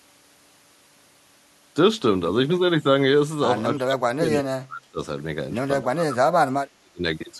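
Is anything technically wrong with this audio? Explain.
Yes. Speech is suppressed in double talk three times: 3.76 to 4.31 s, 4.53 to 4.98 s, and 5.82 to 7.04 s. Each time the level dips hard, by about 25 to 30 dB at its deepest. The likely cause is an echo canceller that could not tell the talker from the far side's echo while both spoke, so it turned both down.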